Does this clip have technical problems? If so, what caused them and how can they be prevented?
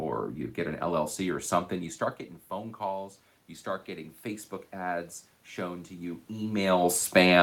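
Yes. Automatic gain rising: after "something you start getting", the input fell by about 12 dB, and the gain control slowly raised its gain by about 7 dB from 2.5 to 6.96 s, so the voice and room noise swell together. Prevent it by setting a fixed input gain or a slower, limited automatic gain control.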